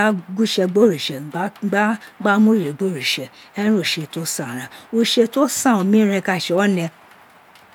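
No dropouts, clicks, distortion or timing errors can be heard anywhere in the recording.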